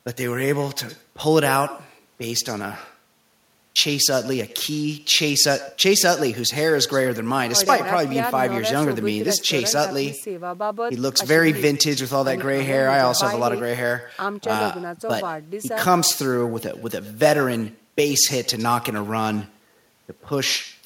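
From start to finish the speech carries an echo with no canceller. The far end is playing the call through a loudspeaker, its microphone is catching that playback, and nothing subtracts it, so the talker's own voice returns after the network round trip, about a tenth of a second late and about 18 dB down. Unlike room reverberation, which smears into a diffuse tail, this is a distinct, thinner second copy trailing each phrase.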